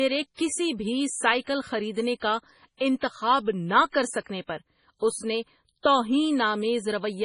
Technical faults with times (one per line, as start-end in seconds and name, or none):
0.00-7.24 MP3 compression
2.77-2.81 pre-echo